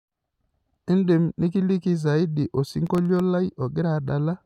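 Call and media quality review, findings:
Gritty crackle burst across speech, 2.87–3.20 s, about 0.33 s. Processor overload crackle: audio thread missing deadlines, around ten dropouts filled with silence, hard-edged. Pattern fits a very small buffer, well under a millisecond.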